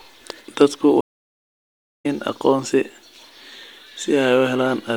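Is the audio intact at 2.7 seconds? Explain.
Yes, the speech runs intact through 2.7 seconds, with no dropout, click or other fault at that moment.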